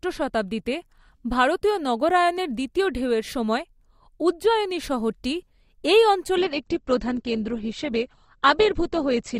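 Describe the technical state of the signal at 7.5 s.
At 7.5 s the adaptive stream is at a lower bitrate, from 6.35 s to the end: a sudden, gapless switch strips treble above 8.2 kHz and adds codec artefacts, which fits Opus falling to about 16 kbit/s.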